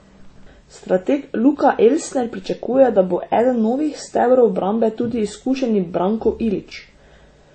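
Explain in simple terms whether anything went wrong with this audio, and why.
Something did go wrong, and it lasts the whole clip. The speech sounds dull, with different artefacts heard together. Nothing is heard above about 8.4 kHz, so the crisp top end is gone. This is most likely transcoding between lossy codecs. The sound was squeezed by one compressor, then squeezed again by another. The second pass copied the first one's damage and added its own. The mix of artefacts points to an MP3 file later saved as WMA.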